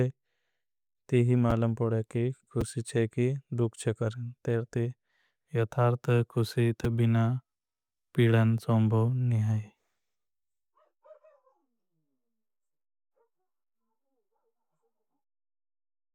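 Brief jumbled moments at 1.50 s (just before "पड़े कि"), 2.61 s (after "पड़े कि", before "चे की दुख चे") and 6.84 s are chunks out of order: a 5.33 ms chunk plays one slot late, creating hard joins.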